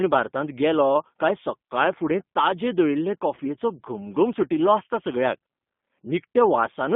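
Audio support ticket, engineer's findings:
G.729 codec on the whole call: band-limited to roughly 150 Hz to 3.6 kHz, rough synthetic edge from 8 kbit/s pulse-coded excitation. Codec damage plainly audible throughout.

VoIP packet loss concealed by the speech codec, 3.35 to 3.39 s, right after "काय सक्काळफुडें ताजे दळिल्ले": brief stretched, fading smear. About 20 ms missing, which fits one dropped packet; decoder extrapolated, then recovered.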